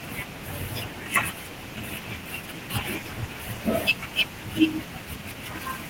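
Nothing stood out as a technical problem on listening to this speech recording.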